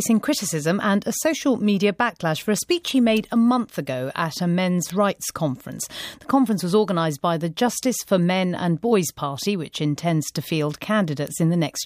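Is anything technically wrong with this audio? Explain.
Yes. Word clock ticks recur from 0.65 s to 11.27 s, about every 0.7 s. The receiving device runs on its own clock, drifting around 30 ppm from the sender's, so each time they slip one sample is dropped or repeated, producing a sharp, regular tick.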